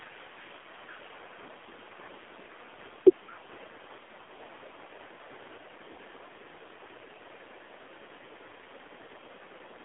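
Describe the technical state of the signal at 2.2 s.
At 2.2 s the speech shows AMR narrowband mobile codec damage, present throughout. Only 300 Hz to 3.5 kHz passes, so it sounds thin and phone-like. A vocal tract model with sparse pulses rebuilds it. The buzzy, synthetic texture fits the 7.4 kbps mode.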